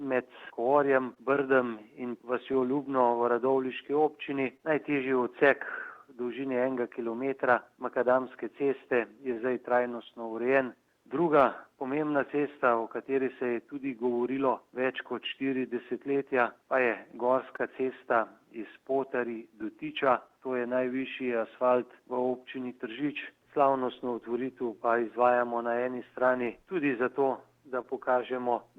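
Clock drift between sender and receiver runs through the whole clip. The sender's clock is slower than the receiver's, by about one and a half percent. The receiver's buffer keeps draining as a result. Small timing hiccups recur at uneven intervals from start to end. They give the sound a faintly unsteady pace rather than any single obvious break.

Scattered short gaps come first, from 0.45 to 13.50 s. About fifteen packets go missing or arrive late here, one at a time. Each hole is at most about 20 ms. The receiver fills it by stretching the last bit of sound. Together these patches add up to roughly 150 ms. They are heard as brief ticks or tiny smears.

Repeated timing corrections begin at 3.18 s and continue to 26.44 s. The receiver keeps repeating short pieces to make up for the slow sender. This plays the sound at 99% speed and adds around 150 ms in all. The edits all lengthen the sound, but their spacing is irregular. 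They come across, if at all, as slight hiccups and a tempo that wavers.

Scattered short gaps return from 17.56 to 21.01 s. About five small holes appear, each up to about 20 ms. Each is patched the same way, with brief ticks or smears.

Scattered short gaps appear a final time from 26.46 to 27.85 s. There are about three, again up to about 20 ms each. The concealment leaves brief ticks near the end.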